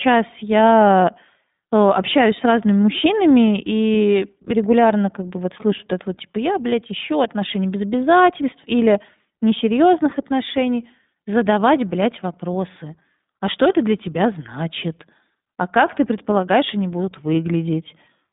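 From start to end the speech has passed through the iLBC codec, coding each 20 ms frame independently at a rate that fits 15.2 kbps over a 150 Hz to 3.7 kHz line. Nothing survives above 3.8 kHz, so the voice sounds muffled, plainly rough and slightly synthetic.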